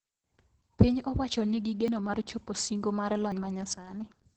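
From start to finish the speech carries heavy Opus voice compression. There's nothing above about 8 kHz, so the top is cut off, and the voice has that muffled, hoarse, slightly robotic grain. That points to the SILK speech coder in wideband mode running at a low bitrate, somewhere around 10 kbps. At that rate the coder doesn't have enough bits to shape the excitation finely, so it gets coarse and you hear it as roughness.

At 1.88 s, between "owacho ni gi" and "mar chopo singo mar", there's a small jump in the sound, and the same thing happens again at 3.32 s, right after "mar chopo singo mar". Both sound like a dropped buffer (overrun), likely the program not reading its samples before the hardware overwrote them. Each time a short chunk of roughly 20 ms is missing, and the two sides are butted together with no gap of silence.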